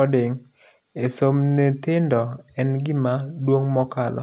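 No technical faults can be heard in this speech clip. It has passed through a WebRTC call path, and nothing comes through above 4 kHz, which fits the narrowband G.711 mu-law codec.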